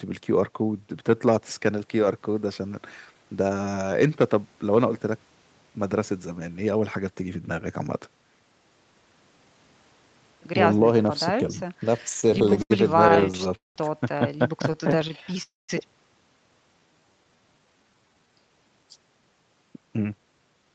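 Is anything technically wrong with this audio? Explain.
Yes. The speech in the second half has several timing faults typical of a call with unsteady packet delivery.

Repeated stalls (stutter) come in three bursts: 11.97–12.72 s, 13.08–13.78 s and 14.68–15.40 s. Packets arrived late, so the jitter buffer kept running dry and the receiver stretched the last sound to fill each gap. The first burst has about a dozen short hitches up to 79 ms. The second is worst, with pauses up to 191 ms filling roughly 40% of its span. The third has only brief catches of up to 13 ms. Nothing is lost, but the speech drags and jerks.

A call audio freeze follows at 15.42–15.71 s. The sound is held as a fading buzz for 261 ms, about 190 ms of which is silence, and then continues from where it stopped. The likely cause is packets held up in transit, which emptied the jitter buffer and inserted a gap.

A jitter buffer slow-down runs from 16.79 to 18.32 s. 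The receiver rebuilt its reserve by repeating individual pitch periods, adding 254 ms. The speech plays at about 84% speed at unchanged pitch, so sounds are drawn out.

A jitter buffer speed-up runs from 19.73 to 20.70 s. Excess buffered audio was trimmed by removing short pitch-period pieces, around 150 ms in total. Delivery runs at about 113% speed at the same pitch, giving a hurried quality.

Nothing above 8 kHz is present, which fits the Opus codec on this call path running at a wideband setting.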